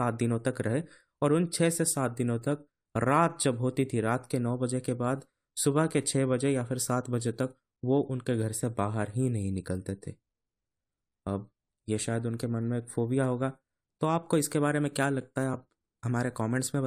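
No technical faults are audible.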